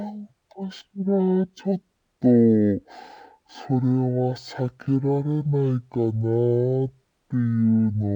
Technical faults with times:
0.00-8.15 stereo read as mono

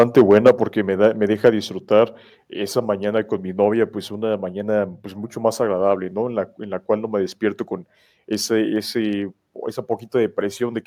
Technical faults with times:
0.00-0.51 microphone overload
0.49 microphone volume stepped down
1.44-1.49 microphone overload
1.50 microphone volume stepped down

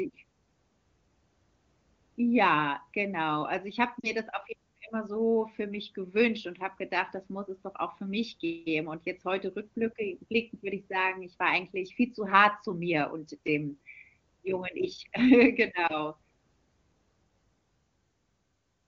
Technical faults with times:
4.00-4.10 lost AMR speech frames
15.88-15.93 lost AMR speech frames

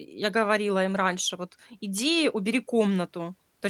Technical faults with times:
none

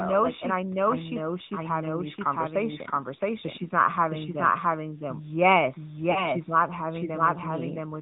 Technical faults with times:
0.00-8.01 doubled audio track
0.00-8.01 AMR narrowband mobile codec
6.12-6.31 lost AMR speech frames

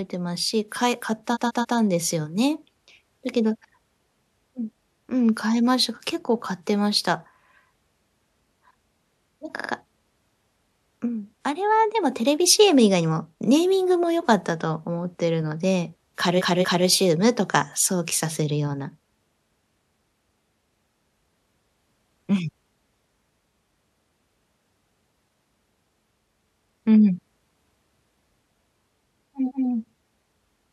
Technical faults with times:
1.33-1.74 repeated frames
9.55-9.68 repeated frames
16.37-16.84 repeated frames
29.47-29.65 repeated frames

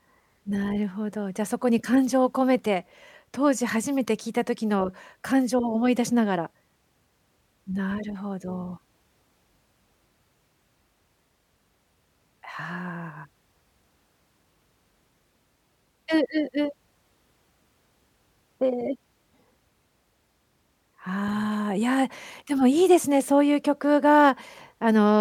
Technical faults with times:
none

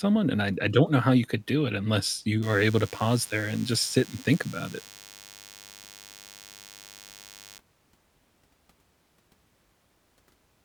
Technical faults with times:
2.43-7.58 DECT cordless phone buzz

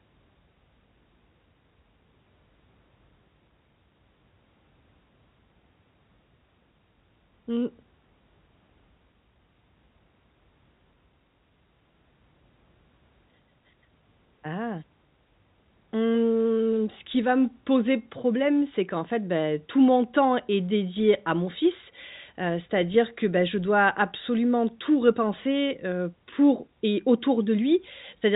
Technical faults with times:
none

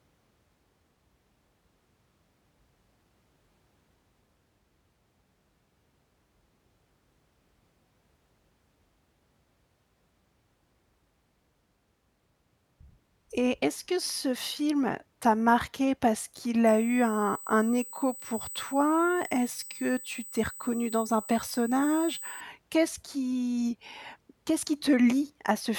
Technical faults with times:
16.67-22.41 USB whine

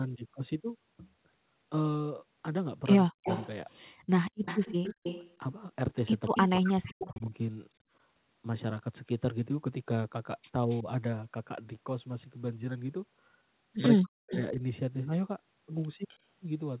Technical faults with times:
3.06-3.26 speech suppressed in double talk
3.23-7.20 echo leak
6.31-7.34 speech suppressed in double talk
10.67-10.86 speech suppressed in double talk
10.69-10.81 echo leak
13.99-14.59 speech suppressed in double talk
14.29-14.40 echo leak
16.08-16.18 echo leak

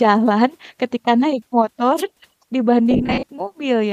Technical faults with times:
1.96-2.03 wireless microphone noise hit
2.91-3.27 lost LE Audio frames

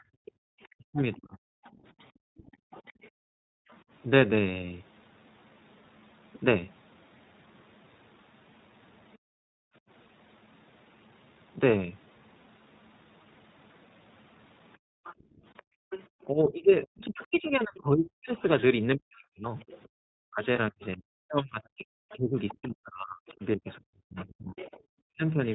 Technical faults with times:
0.00-25.54 iLBC codec
0.00-3.69 background gated by the echo canceller
0.25-3.77 other side's voice leaking through
0.77-1.60 speech suppressed in double talk
9.13-9.17 other side's voice leaking through
9.18-9.83 background gated by the echo canceller
14.78-15.90 background gated by the echo canceller
15.05-25.54 other side's voice leaking through
16.29-25.24 speech suppressed in double talk
20.56-20.59 lost iLBC frames

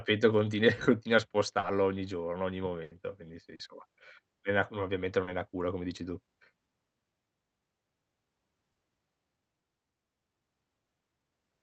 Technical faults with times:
1.59-1.66 short concealed packet loss
2.83-2.94 burst of packet loss
3.55-3.62 short concealed packet loss
5.23-5.30 short concealed packet loss
8.71-8.78 short concealed packet loss

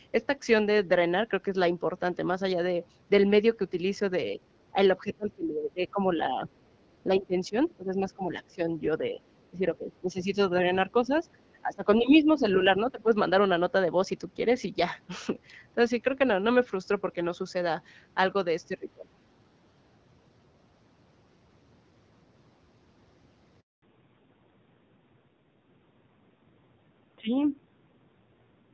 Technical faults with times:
4.33-4.39 speech suppressed in double talk
4.73-6.49 speech suppressed in double talk
7.05-8.63 speech suppressed in double talk
8.99-9.20 speech suppressed in double talk
9.51-10.52 speech suppressed in double talk
10.87-11.10 speech suppressed in double talk
11.61-13.13 speech suppressed in double talk
18.68-19.08 speech suppressed in double talk
23.60-23.82 handover gap
23.82-28.73 fallback to narrowband

